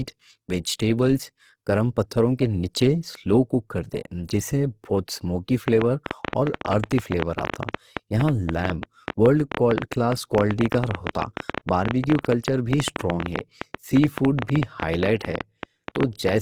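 From the start and throughout, the speech carries plainly audible codec damage, most likely Opus compression running in its CELT music mode at a low bitrate, around 16 kbps by the sound of it. The bandwidth stays full, but there are too few bits to code each band accurately, so the encoder keeps band energies and fills in detail by folding lower bands or inserting noise. Voiced sounds come out grainy, rough and noisy rather than swirling.

From 5.68 s to 16.30 s a train of clicks runs over the speech and through the pauses, about ten per second at an irregular pace, roughly a hundred in all. The pulses share much the same shape and stand about 15 dB above the signal, heard as a persistent ticking. The likely cause is interference from nearby equipment, or a faulty connection or power supply injecting repeated pulses into the path.

At 6.28 s a pre-echo appears, with a short hiss spreading about 46 ms ahead of a sharp attack and ending at 6.33 s. 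The transform codec spreads quantisation noise evenly across its block, so noise sized for the loud onset also fills the quiet moment just before it. The attack loses its crispness and sounds smeared, announced by that brief wash of noise.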